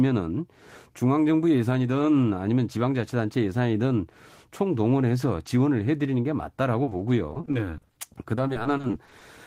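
A speech clip with repeated packet loss (robotic sound) from 6.83 to 9.23 s: roughly two dozen short gaps, up to 40 ms, patched by stretching prior sound, unlike one isolated dropout.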